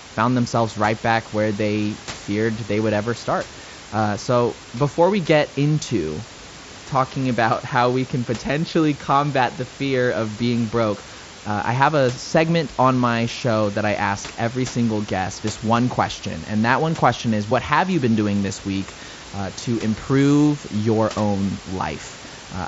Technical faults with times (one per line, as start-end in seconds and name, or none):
none